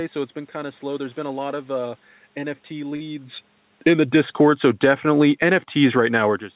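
A short stall from a late packet occurs at 2.96 to 3.03 s. A packet arrived late, the jitter buffer emptied, and the receiver held the last sound for about 41 ms before resuming where it stopped. Nothing is lost, but the sound drags briefly and arrives 41 ms later.

Automatic gain falling runs from 3.7 to 6.2 s. The gain control judged the input too loud or its background noise too strong and lowered its gain step by step by about 8 dB, so the speech and the room noise behind it sink together rather than the talker alone fading.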